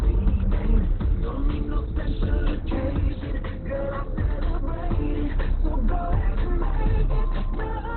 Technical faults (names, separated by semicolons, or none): Opus compression